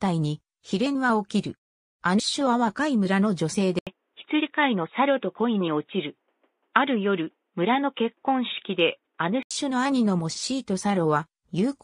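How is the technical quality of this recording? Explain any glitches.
The recording has three glitches: two brief bursts of corrupted decoding and a long stretch where the sound turns narrow and dull.

Damaged data in a compressed stream, at 2.18 s and again from 4.39 to 4.41 s: part of the encoded data was wrong, so the decoder misread those frames, lost sync and had to find the next valid frame header. Each lasts about 20 ms.

Input switched to a poorer device, from 3.79 to 9.51 s: the recording system likely changed mid-recording to a narrower-band input. After an 80 ms silence at the switch, nothing above 3.8 kHz remains and a faint new background noise appears. The level stays about the same, and the sound clears again at 9.51 s.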